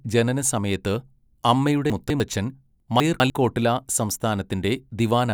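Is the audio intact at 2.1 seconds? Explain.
No. Between 1.9 and 2.2 s the speech has chunks out of order: one 100 ms chunk arrived late and plays two chunks after its proper place. Nothing is missing, but the reordered pieces meet at three hard joins, producing a jumbled, garbled moment.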